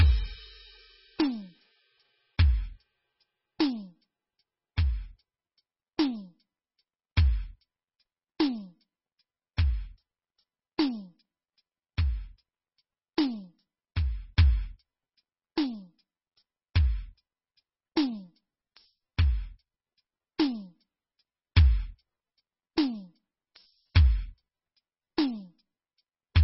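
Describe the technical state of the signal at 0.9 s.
At 0.9 s the music is affected by damage that runs through the whole clip and is likely MP3 compression at a very low bitrate, consistent with about 16 kbps. Starved of bits, the encoder discards the treble outright and drops quieter spectral detail that flickers in and out between frames. Nothing is audible above 5.6 kHz, so the top end sounds dull and boxed-in, and the heavy damage leaves a watery, swirling texture with smeared attacks.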